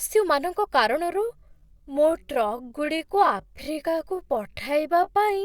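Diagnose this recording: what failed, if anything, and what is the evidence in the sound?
From 1.09 s to the end, speech slows to 0.68x pace while pitch holds. This time-stretched section likely comes from software repeating short pieces to fit a length.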